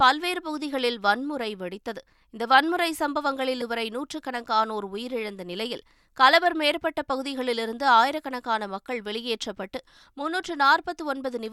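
Speech, with damaged data in the compressed stream at 3.61 s: a short run of corrupted bytes made the decoder misread the frames there and lose sync until it found the next frame header, leaving a brief glitch lasting about 12 ms.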